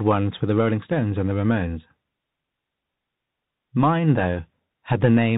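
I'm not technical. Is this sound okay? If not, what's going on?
No. The whole clip, from start to finish, carries the sound of a Bluetooth CVSD headset codec, the narrow-band link used for hands-free calls. It describes the sound one tiny up-or-down step at a time, so nothing above 4 kHz gets through, and the speech sounds boxed-in and phone-like. Sudden loud high sounds outrun those steps and distort, s sounds come out scratchy, and a grainy hiss sits underneath the speech. The damage is plainly audible.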